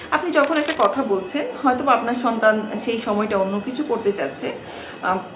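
A worn cable, connector or control was likely moved here, its contact resistance jumping about and producing cable scratch noise: from 0.44 to 0.86 s, dense, uneven crackling and rustling sits only slightly below the sound, which the call path limits to nothing above 4 kHz.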